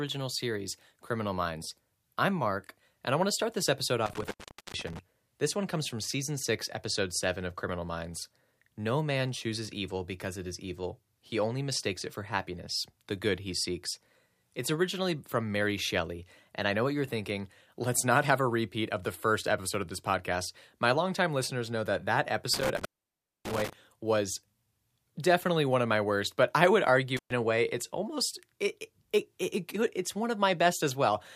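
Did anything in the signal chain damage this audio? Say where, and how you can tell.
Yes: intermittent contact in the analogue wiring at 4.06–4.99 s, 22.54–23.73 s and 27.17–27.33 s, before "a way it's almost". A loose plug or cable opens, silencing the speech for about 0.43, 0.60 and 0.12 s, with crackle at each break and faint hiss between.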